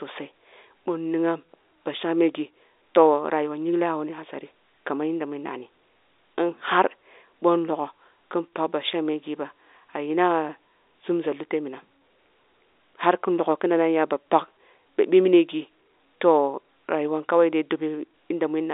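Nothing goes wrong anywhere in this speech; it simply carries the narrow, boxed-in sound of an ordinary G.711 phone line, with the band running from 300 Hz to 3.7 kHz.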